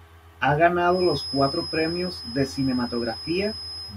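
A speech recording with a feedback whistle that comes in at about 0.85 s and carries on to the end. It's a thin, steady tone at 5.1 kHz, sitting roughly 10 dB under the speech and swelling and fading slowly in level. The likely cause is a loudspeaker-to-microphone loop hovering right at the edge of feedback, so that single frequency keeps ringing without ever building into a full howl.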